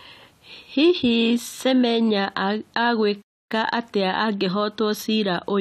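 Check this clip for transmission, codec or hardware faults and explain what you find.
One fault: a playback stall. From 3.21 s to 3.52 s the speech cuts to silence for about 283 ms, then continues. The player likely ran out of buffered data or was blocked. Unlike a brief packet-loss glitch, this is a full, clean silence lasting a noticeable fraction of a second.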